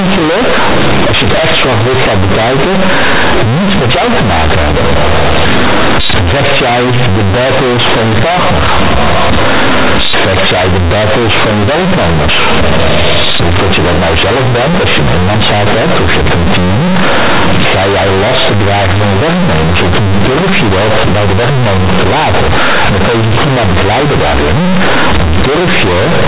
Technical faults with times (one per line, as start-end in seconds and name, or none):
0.00-26.27 companded audio read as linear